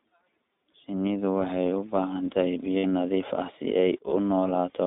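iLBC codec, throughout: the speech has been squeezed through the iLBC VoIP codec, so the line is narrowband. Nothing comes through below about 200 Hz or above 3.7 kHz, which makes the voice thin and boxy. Each short frame's excitation is coded on its own, and here the coding damage is plainly audible as a rough, slightly synthetic grain on every voiced stretch. The overall quality fits iLBC's 15.2 kbps mode with 20 ms frames.

Lost iLBC frames, 0.72 to 0.75 s: for 20 ms, which fits a single dropped frame, the decoder had nothing to play and filled in by repeating the last pitch cycle with added noise. It comes across as a brief held, faintly buzzy vowel. Because iLBC frames stand alone, the voice snaps back right away.

Lost iLBC frames, 2.78 to 2.85 s: right after "baahan tahay" a longer gap of 60 ms, consistent with three frames in a row, is concealed the same way. The substitute pitch cycle holds and fades as the gap goes on, giving a breathy, stretched buzz before normal decoding resumes.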